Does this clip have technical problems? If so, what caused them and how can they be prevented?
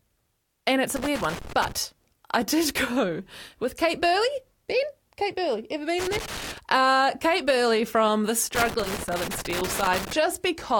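Yes. A loose connector crackle occurs three times: from 0.96 to 1.72 s, between "and it's" and "I did"; from 5.99 to 6.58 s; and from 8.55 to 10.13 s, just after "from the". A worn or dirty contact in the signal path is making and breaking as it shifts, chopping the speech, heard as irregular bursts of scratchy crackle. Cleaning or replacing the connectors and securing the cables would prevent it.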